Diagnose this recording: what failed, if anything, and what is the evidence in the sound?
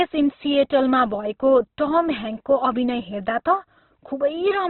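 The codec stage failed. Across the whole recording the speech is narrowband, with nothing above about 4.1 kHz. The upper consonant detail is gone. Heavy Opus compression is the likely cause. The encoder stayed in its music mode, CELT, and kept each band's energy while starving it of bits. Those bands were filled with folded or noise content, so voiced sounds come out grainy and rough, not swirly. The damage fits a bitrate near 12 kbps.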